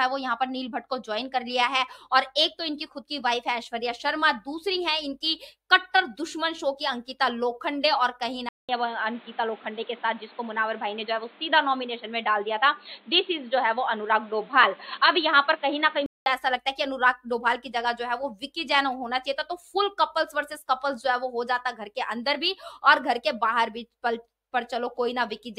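At 8.49 s the sound drops out for about 200 ms, then returns dull and boxy, with nothing above 4.3 kHz and a faint new background noise sitting well below it, though the overall level stays about the same. It clears again at 16.26 s. This is likely an input switched to a poorer device: the recording moved mid-take onto a narrower-band microphone or a headset's call profile, then back to the original input.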